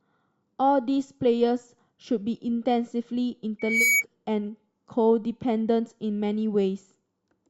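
At 3.59 s a microphone begins picking up the loudspeaker it feeds, and at one frequency the loop gain tips past unity, producing loudspeaker feedback squeal. A single tone near 2.3 kHz grows on each trip around the loop, swelling over roughly a third of a second until it rides a few decibels above the speech as a piercing whistle. It lasts until 4.04 s, when the squeal cuts off.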